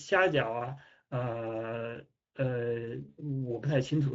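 Speex codec damage runs through the whole clip and is plainly audible. This CELP speech coder models the speech as a filter driven by a coded excitation, and the excitation gets a limited share of bits. That lack of detail makes the speech sound noisy and hoarse. The degree of roughness points to a mid-quality setting, consistent with about 16.8 kbps.

VoIP packet loss concealed by the speech codec occurs from 3.09 to 3.19 s. About 80 ms of audio went missing, which fits four lost 20 ms frames. The decoder filled the gap by extending the last pitch and filter it had received while lowering the gain, so the speech smears into a fading buzzy tone or coloured noise. Each frame builds on the one before, so the speech stays weak or distorted for a short time after real data resumes.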